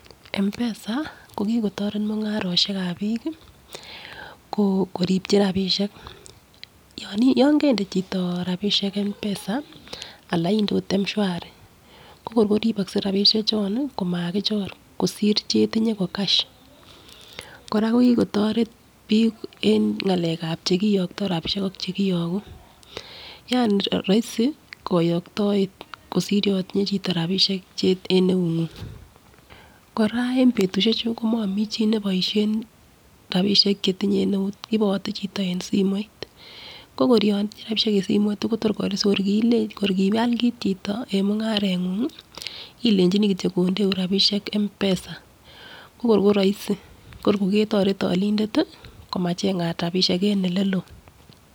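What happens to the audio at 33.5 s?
At 33.5 s the speech carries on intact, with no dropout, click, distortion or other fault at that moment.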